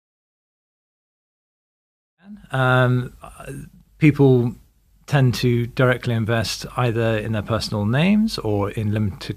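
Nothing wrong turns up in this speech, just a smooth editor-style fade-in that rises from around 2 s and reaches full level by 2.9 s without any click or hard edge.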